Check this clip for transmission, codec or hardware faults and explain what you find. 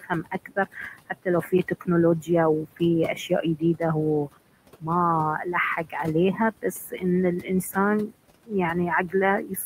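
The faults here come from noise suppression, not from transmission or the codec.

Noise suppressor artifacts run through the whole clip. Frame by frame, the suppressor pulls down the bands it judges to be steady noise by about 21 dB. The room noise, about 15 dB below the speech, dips between phrases and returns beneath them.

Speech cut by the noise suppressor occurs from 0.01 to 4.88 s and again from 5.44 to 9.65 s. The suppressor mistook quieter parts of the speech for noise and lowered them along with the background, by up to about 21 dB in the first stretch and about 19 dB in the second. In the first stretch this adds up to roughly a second of affected speech. Soft consonants and word endings there sound swallowed or faint.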